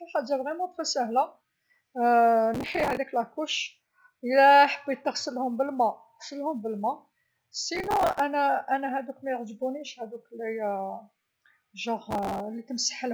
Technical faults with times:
2.54-2.97 processor overload crackle
7.75-8.20 processor overload crackle
12.11-12.40 processor overload crackle

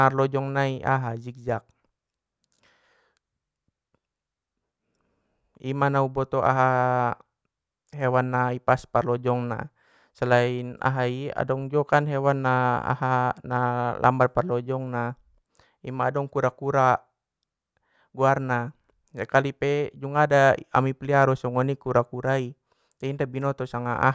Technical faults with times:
none

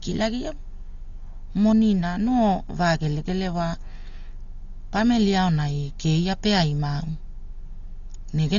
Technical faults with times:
0.00-8.58 Dolby Digital compression

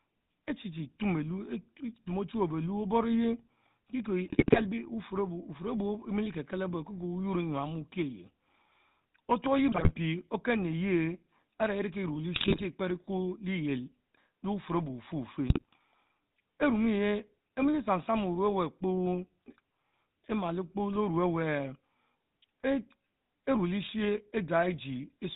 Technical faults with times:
0.00-25.36 GSM full-rate codec
4.26-4.63 GSM bit errors
9.72-9.91 GSM bit errors
12.36-12.62 GSM bit errors
15.50-15.77 GSM bit errors

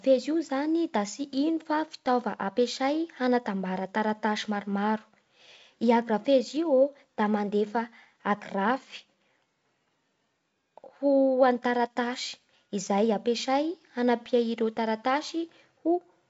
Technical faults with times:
none

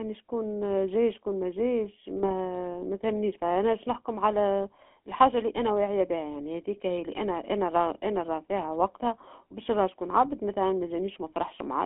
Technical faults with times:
0.00-11.86 GSM full-rate codec
2.16-2.31 GSM bit errors

